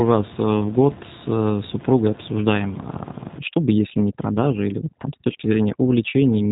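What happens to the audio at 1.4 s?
At 1.4 s the speech carries G.729 codec damage, which runs through the whole clip rather than starting there. The codec resynthesises speech from a vocal tract filter, a pitch predictor and a few pulses per 10 ms frame, which fits an 8 kbit/s VoIP link. The result sounds plainly rough and synthetic, and the room noise, about 18 dB below the speech, warbles. On a spectrogram, energy stops abruptly near 3.8 kHz, with smeared, blocky harmonics below.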